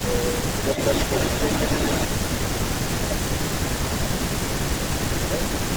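Speech with two related call faults. The talker's level keeps sinking in places, from 0.01 to 0.37 s, 0.58 to 0.70 s, 2.07 to 2.39 s, 2.94 to 3.43 s and 4.12 to 5.64 s. The dips run from around 10 dB to as much as 20 dB at 2.07 s, and the longest stretch is affected for about a second in total. This is likely speech suppressed in double talk: with both ends speaking, the echo canceller turned the near voice down along with the echo. From 0.71 to 2.07 s there is an echo leak instead, probably from a loudspeaker whose echo was not fully cancelled. A second copy of the voice trails the original by 292 ms at roughly the same loudness. What sets them apart is that suppression takes sound away, as gaps and fades, while the leak adds sound, as a distinct delayed repeat layered over the talker.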